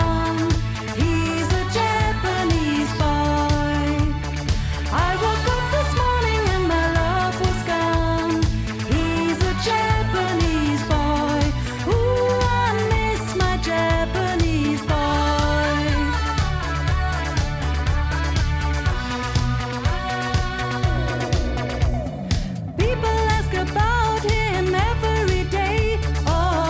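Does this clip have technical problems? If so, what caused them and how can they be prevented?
No, nothing here points to a technical problem, so there's nothing to trace back or guard against this time.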